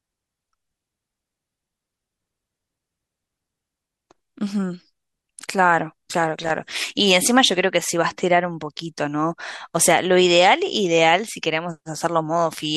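At 6.43 to 6.51 s the speech is broken by about 78 ms of loose connector crackle, an irregular scratchy burst where a worn contact flickered open and shut. The waveform shows jagged dropouts and steps; the spectrogram shows scattered broadband vertical streaks.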